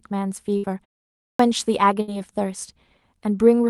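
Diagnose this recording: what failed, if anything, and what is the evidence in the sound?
Playback stage: clipped start after a pause at 1.31 s. The output device, idle for 0.54 s, woke late, losing the first 84 ms.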